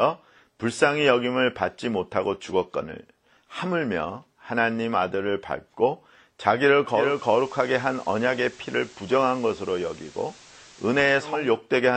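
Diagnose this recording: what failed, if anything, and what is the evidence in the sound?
The fault is digital radio blending to analogue, in the hybrid tuner's reception stage. At 6.84 s the sound cross-fades over about 430 ms from the digital stream to the FM broadcast. The level drops by about 1 dB, and a hiss floor appears roughly 25 dB under the signal. The digital stream returns at 11.6 s. A codec bandwidth drop would cut the treble, but it would bring no hiss and no gradual blend.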